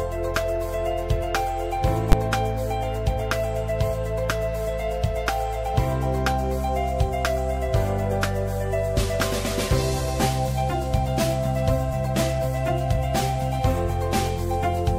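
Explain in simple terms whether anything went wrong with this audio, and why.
Invalid numbers at full scale, at 2.12 s: a calculation broke and produced infinite or meaningless values, which the system turned into the loudest possible signal. Because the affected stretch lasts only about 11 ms, consistent with a 512-sample processing block, it comes out as a single sharp bang.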